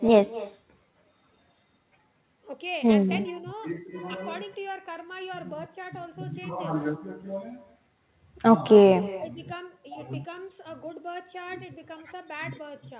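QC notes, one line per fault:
Throughout: echo with no canceller. Every phrase is trailed by a fainter copy of itself roughly a fifth of a second later, sitting about 18 dB under the direct sound. It comes across thin, like the talker's own voice bouncing back off the far end. That's the far side playing the call over a speaker, its mic catching it, and nothing stripping it out before it returns. The narrow, telephone-band top end (nothing above 4 kHz, which fits G.711 mu-law) is just the call codec working normally.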